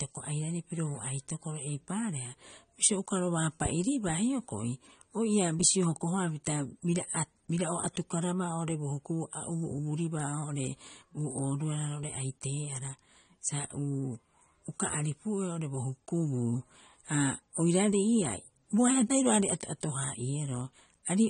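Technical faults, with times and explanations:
Throughout: transcoding between lossy codecs. The speech was most likely encoded as MP3 at about 49 kbit/s and then re-encoded as AAC-LC at 32 kbit/s. The second codec spends its bits on the first one's artefacts and adds its own, so two kinds of smearing overlap, and nothing remains above 9.7 kHz.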